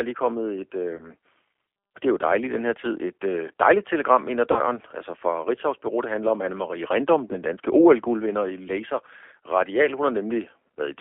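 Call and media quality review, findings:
G.729 codec throughout: speech stuck in a 300 Hz to 3.4 kHz phone band, plainly rough and synthetic. Fits G.729A at 8 kbit/s, with sparse pulse excitation rebuilding the voice.

VoIP packet loss concealed by the speech codec at 0.97–1.07 s, 4.52–4.62 s (right after "dejligt telegram ind ad") and 7.28–7.35 s: buzzy or noisy, fading smear as the decoder extrapolates. Gaps of about 20, 40 and 20 ms fit one, two and one lost packets.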